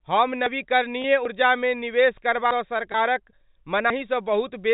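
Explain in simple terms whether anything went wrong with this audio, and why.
Four jumps forward at 0.46, 1.25, 2.51 and 3.90 s are a dropped buffer (overrun): a short piece of speech, likely skipped because the recorder fell behind, is simply missing, with no gap of silence. At 1.02 and 2.92 s the sound instead briefly holds a buzzy note for about 20 ms. That is packet loss with pitch repetition, which fits one lost packet each time, and it sounds like a stretch rather than a click. The narrow telephone sound comes from G.711 telephone coding, which is working as intended.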